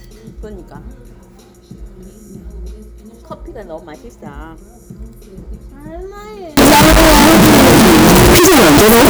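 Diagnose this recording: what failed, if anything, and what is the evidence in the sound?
Signed and unsigned mixed up, 6.57 to 9.10 s: loud, harsh distortion with quiet moments as loud as the rest. The likely cause is sample-format conversion flipping the top bit, so each zero crossing jumps full range.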